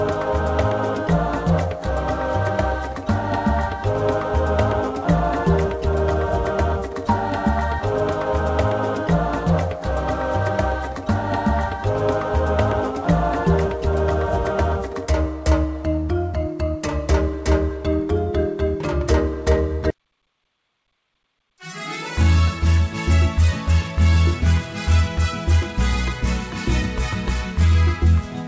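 Nothing is technically wrong with this audio, which came through a WebRTC call path whose G.722 coding leaves nothing above 8 kHz.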